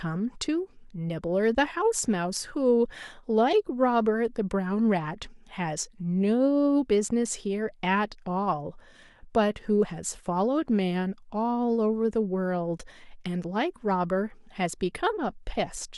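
No technical faults occur at any point in the speech, so there is nothing to describe in time order.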